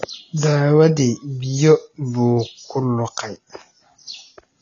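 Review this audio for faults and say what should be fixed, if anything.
AAC compression throughout: the speech sounds dull and smeared, with nothing above 7.9 kHz, likely from AAC-LC at a low bitrate, consistent with roughly 24 kbps. Encode at a higher bitrate, or keep a lossless master, so the codec isn't forced to discard the upper spectrum.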